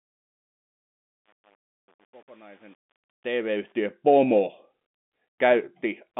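From 0.0 to 3.72 s the speech fades in with truncation distortion on a fade. The undithered gain stage keeps too few bits, which fits about 8-bit resolution. Until 3.32 s the start sounds gritty. The waveform shows square steps, and the spectrogram shows speckled grit below 3.8 kHz.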